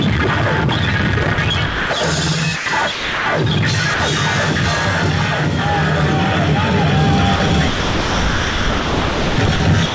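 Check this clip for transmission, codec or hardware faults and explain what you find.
Yes, the clip has voice-detector faults: holes where the sound is replaced by steady synthetic noise. It reached the listener through a call path whose G.722 coding leaves nothing above 8 kHz.

Sound chopped by the voice detector, from 1.24 to 1.38 s and from 7.36 to 9.60 s: the sound breaks up into repeated holes filled with comfort noise. About 60 ms is lost in the first stretch and about 1.8 s across the second. The likely cause is the sender's detector repeatedly switching transmission off and on, mistaking quieter parts of the sound for background.

Sound dropped by the voice detector, at 1.66 to 1.90 s, 2.56 to 2.66 s, 2.92 to 3.26 s, 3.94 to 4.00 s, and from 9.86 s to the end: each time the sound gives way to steady noise, lasting from 60 ms to 340 ms. It returns when the detector triggers again, except in the final gap, which runs out the clip. 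The likely cause is the detector taking quiet sound for background and stopping transmission, with the receiver playing comfort noise in its place.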